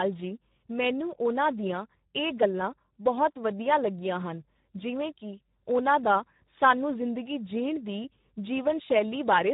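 Throughout, there's heavy Speex codec damage: low-rate coding that fits about 8 kbps starves the excitation, so the speech sounds noisy and hoarse, with nothing above 3.8 kHz.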